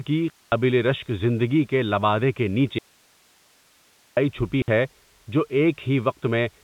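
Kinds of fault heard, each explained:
Packet loss filled with silence: silence with hard edges replaces lost packets, 220 ms before "رشک زندگی کے لبادے" and 60 ms, both fitting 20 ms packets.
Audio dropout to a faint residue: the sound cuts off for 1.38 s after "زندگی کے لبادے کے", likely a broken link, leaving hiss about 35 dB down, not true silence.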